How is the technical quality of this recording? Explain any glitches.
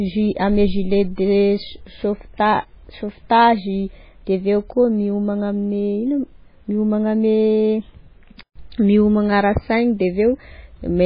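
The technical quality is poor: the speech carries heavy data-compression damage from start to finish, plus one digital click.

Throughout, the most likely cause is MP3 compression at a very low bitrate, somewhere around 16 kbps. Starved of bits, the encoder cuts everything above 5 kHz and zeroes out weaker frequency lines, which then flicker in and out from frame to frame. The result is dull, band-limited speech with a watery, swirling texture, metallic chirping on s sounds, and smeared consonant onsets.

At 7.38 s there is a bit error spike. A single bit flipped in the digital data, corrupting a few consecutive samples so their values jumped by a power of two before snapping back. It is heard as one sharp, broadband tick that has nothing to do with the speech around it.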